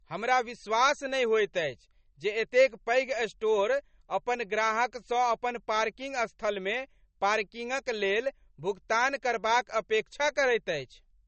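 Low-bitrate audio saved at a high bitrate runs throughout: the speech has nothing above 8.3 kHz and carries smeared, swirling low-bitrate MP3 artefacts. Most likely a roughly 32 kbit/s encode was later re-saved at a far higher rate, which cannot restore the lost detail.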